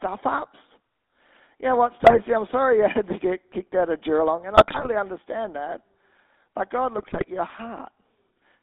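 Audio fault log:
throughout GSM full-rate codec: the 13 kbps coder models the vocal tract and rebuilds it from sparse pulses within a 250 Hz to 3.7 kHz band, leaving the speech plainly buzzy and gravelly.
2.00–2.21 s, 4.56–4.88 s, 6.98–7.25 s GSM bit errors: corrupted filter, pitch and gain values reach the decoder, so the speech breaks into squawks, pops and gargling. The first comes after "know what" and before "I'm sorry you", and the second just before "understand that".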